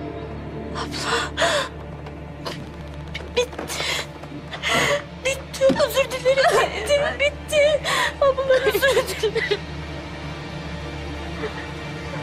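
Right through the clip there's clock drift between sender and receiver: the far end's clock runs around four percent fast, so the receiver's buffer keeps filling and it has to shed little slivers of sound. You get small, unevenly spaced timing hiccups the whole way through.

From 2.60 to 4.02 s a train of clicks sits over the sound, about twenty of them at a steady 14.9 per second, peaking roughly as loud as the audio itself. It's a regular ticking, and it's likely interference from nearby gear or a faulty connection or power supply.

Then from 5.63 to 8.76 s come repeated timing corrections, where the receiver keeps trimming short pieces to keep pace with the faster sender. The pace comes out at about 103 percent, with slight skips and an unsteady tempo across that stretch.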